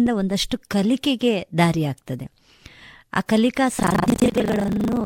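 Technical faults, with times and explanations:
3.76–5.06 s, buffer tearing: a robotic 25 Hz buzz. Writer and reader cross in each buffer, so about half replays audio a tenth of a second old.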